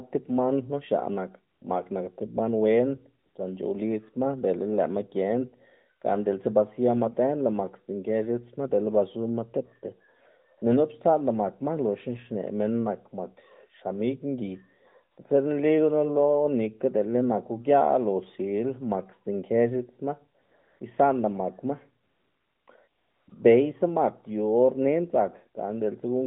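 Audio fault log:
1.54–1.62 s, 3.24–3.36 s, 10.58–10.62 s, 15.12–15.18 s, 20.42–20.80 s, 22.04–22.68 s, 22.88–23.28 s and 23.30–23.32 s, AMR comfort noise: the sending phone treated these gaps as silence and stopped transmitting speech frames. The receiver filled them with synthetic noise built from a rough estimate of the background's level and spectral shape. The real background drops out and a smooth, uniform hiss takes its place, lasting from 20 ms up to 640 ms. The longest runs fall between 20.4 s and 23.3 s.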